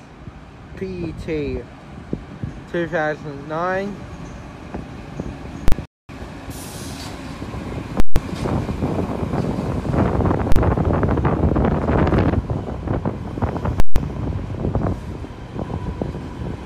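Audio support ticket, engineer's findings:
Invalid numbers at full scale: single hard bangs at 5.68 s and 10.52 s (40 ms blocks). Loud pops framing a dead gap at 8.00–8.16 s and 13.80–13.96 s (160 ms blocks). Probable DSP stage producing infinite or invalid values, clamped to full scale per block. Unlike a dropout, the edges are violent.

Playback stall: audio cuts out in mid-flow at 5.86 s and comes back at 6.09 s, a gap of about 235 ms. Likely cause is a starved buffer or blocked playback thread. Unlike the full-scale blocks, the gap is plain silence with no pops at its edges.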